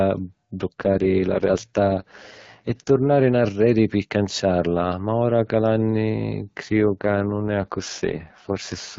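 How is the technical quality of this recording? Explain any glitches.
The recording passes through an AMR wideband (HD Voice) codec, which leaves a light coding colour, and two AMR rate drops interrupt it.

From 0.81 to 2.90 s, ending just before "nnarreri pi canciarla ma", and again from 6.63 to 8.98 s, right after "ma ora cu l’anni", the network forces the codec down to a lower bitrate. The sound fits a fall from 12.65 to 6.6 kbit/s. Bandwidth stays the same and nothing drops out, but the speech turns rough and raspy until the rate recovers.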